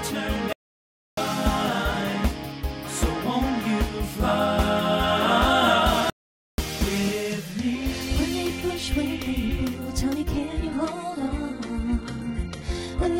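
A playback stall cuts the sound from 0.53 to 1.17 s (about 0.65 s) and again from 6.10 to 6.58 s (about 0.48 s). Each time the output goes silent in mid-flow, likely because the player ran short of data or its thread was blocked, then resumes.

An adaptive stream at a lower bitrate takes over at 10.36 s and lasts to the end. The quality drops abruptly with no gap, and codec artefacts rise. This fits a switch from a 96 kbit/s AAC-LC stream to a 12 kbit/s HE-AAC one.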